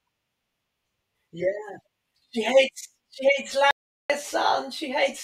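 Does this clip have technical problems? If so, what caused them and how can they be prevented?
Yes. An audio dropout to silence runs from 3.71 to 4.10 s. The speech cuts to silence for 0.39 s, with no room tone. The input was likely lost briefly. Secure cables and connections, and check mute controls before recording.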